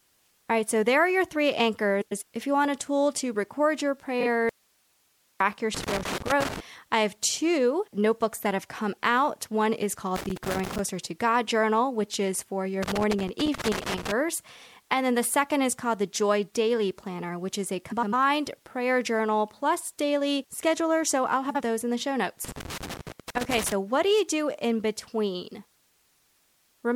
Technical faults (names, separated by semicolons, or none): frames out of order; audio dropout to a faint residue; loose connector crackle